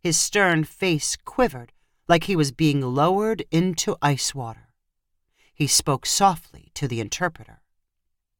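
At 4.27 s the speech carries a single sharp click, heard once and gone instantly. It is most likely dropped samples: a couple of samples, only a few hundredths of a millisecond, went missing, so the waveform jumps straight to a later value. That step shows as a thin vertical line across the spectrum. Unlike a dropout, the loss is too brief to leave any audible gap or silence, and no syllable goes missing.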